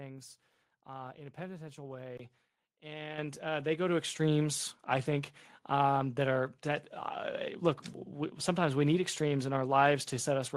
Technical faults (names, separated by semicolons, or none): input switched to a poorer device; microphone volume stepped up